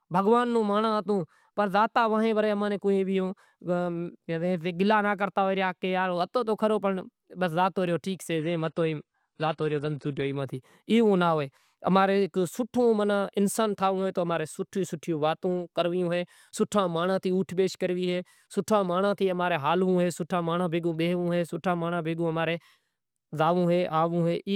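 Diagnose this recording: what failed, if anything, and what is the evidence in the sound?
The adaptive stream dropped to a lower bitrate, a network-driven codec switch, from 8.4 to 10.4 s. The speech abruptly loses its top end, with nothing above 10.2 kHz, which fits a step down to roughly 32 kbit/s AAC. A spectrogram shows a flat ceiling across that window, and the waveform shows no gap.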